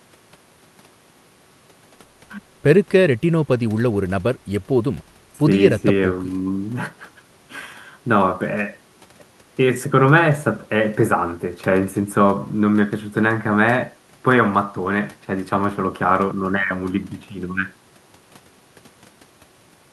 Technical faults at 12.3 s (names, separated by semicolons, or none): none